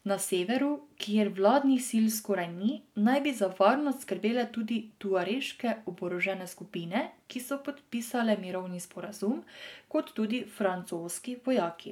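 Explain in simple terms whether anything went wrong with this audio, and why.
Nothing went wrong: no dropouts, clicks, distortion or glitches can be heard anywhere in the recording.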